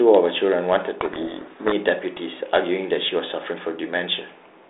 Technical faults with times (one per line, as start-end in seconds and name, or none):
1.01-1.72 codec payload misread